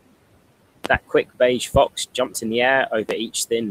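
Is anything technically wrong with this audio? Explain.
Yes, there are loud pops: a double one at 0.85 to 0.97 s just before "quick beige", then single ones at 1.75 to 1.78 s after "quick beige" and 3.09 to 3.13 s after "in the". Each sits roughly 15 to 20 dB above the speech, which carries on underneath. The likely cause is a voltage spike from a plug, switch, static or driver glitch, shaped by the downstream circuitry into a sharp thump.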